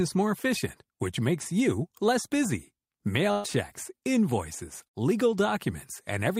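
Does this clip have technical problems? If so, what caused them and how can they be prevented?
Yes, two bursts of packet loss, at 3.31 to 3.47 s and 4.88 to 4.96 s, where lost packets were concealed by stretching and fading the last sound for about 125 ms and 51 ms, then skipping ahead past roughly 120 ms and 60 ms of speech. Unlike a plain dropout, the gaps hold a fading buzz or hiss instead of silence. A larger jitter buffer, forward error correction or a steadier network connection would prevent it.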